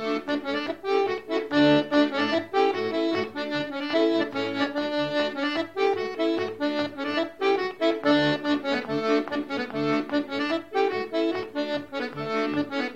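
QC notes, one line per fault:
No faults heard anywhere in the clip.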